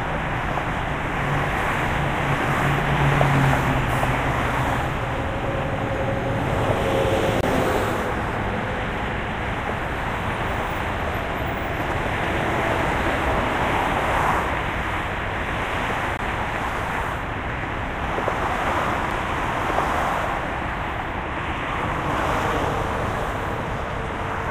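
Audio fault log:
7.41–7.43, 16.17, 19.10 block of digital silence: output drops to silence for about 23, 17 and 6 ms with hard edges and no fade, unlike a smoothed dropout, and the lengths fit unfilled buffers of roughly 1024 and 256 samples.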